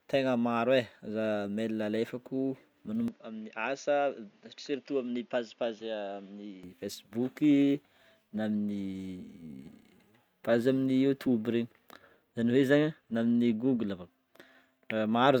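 At 3.08 s the speech abruptly loses everything above 7 kHz, drops about 5 dB, and gains a faint new noise floor, with no gap at the change; this is likely the input switched to a poorer device, until full band returns at 6.63 s.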